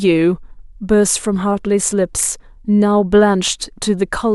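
The speech recording carries no audible technical faults. Nothing in it calls for a timestamp or a repair.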